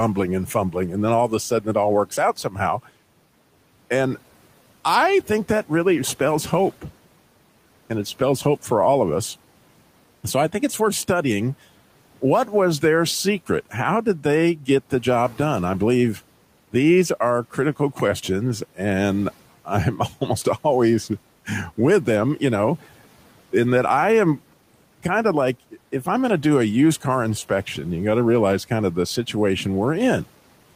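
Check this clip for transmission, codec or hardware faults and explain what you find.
One fault turns up, twice in quick succession: speech cut by the noise suppressor, from 1.5 to 1.75 s and again from 2.44 to 2.6 s. The suppressor mistook quiet parts of the speech for background and pulled them down by up to about 12 dB. That leaves brief, faint, swallowed stretches, with roughly a tenth of a second affected in each. The room noise sits about 25 dB under the speech.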